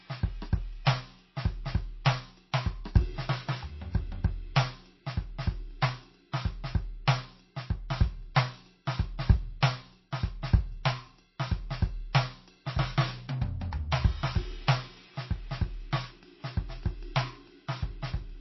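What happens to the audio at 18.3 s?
Likely MP3 compression runs through the whole music clip, including 18.3 s, and the damage fits a bitrate near 24 kbps. Short of bits, the encoder removes everything above 5.8 kHz and flickers weak frequency lines between frames. The result is dull, watery, swirling sound with smeared attacks.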